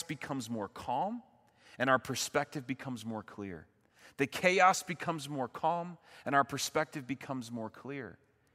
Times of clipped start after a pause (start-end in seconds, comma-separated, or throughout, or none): none